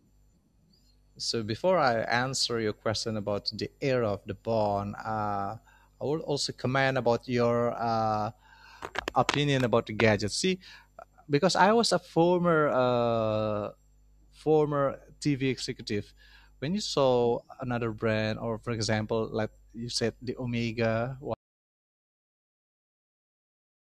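The input to the recorder was likely lost, through a disconnected device or failed link, while writing continued, so this speech recording suffers an audio dropout to silence from 21.34 s to the end: the sound cuts off mid-flow and leaves silence, without room tone.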